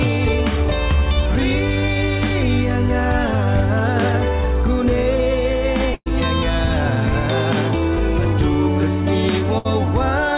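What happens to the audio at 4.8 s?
Nothing goes wrong at 4.8 s: the audio passes through intact, with only the narrow telephone-band sound of the call path, which stops near 4 kHz, as it does throughout.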